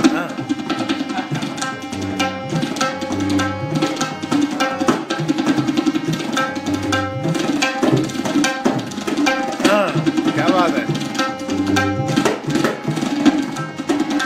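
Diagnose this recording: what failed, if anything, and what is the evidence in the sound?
No faults detected anywhere.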